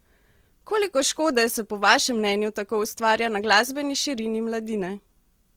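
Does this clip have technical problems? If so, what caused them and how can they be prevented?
Yes. Throughout the speech, the sound is rough and grainy, with a noisy fizz on the higher harmonics. That points to Opus compression, likely at a low bitrate around 24 kbps in its music mode. The encoder keeps each band's energy but fills bands it can't afford with folded or noise-like content. Unlike MP3 damage, there is little swirling or watery warble, just a steady coarse texture at full bandwidth. Encoding at a higher bitrate prevents it.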